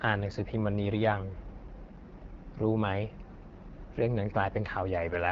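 Throughout the clip, the speech passes through the AMR wideband (HD Voice) codec at a very low rate, most likely around its 8.85 kbit/s mode. The speech model gets too few bits per frame, so the speech sounds rough and raspy, and nothing remains above 7.6 kHz.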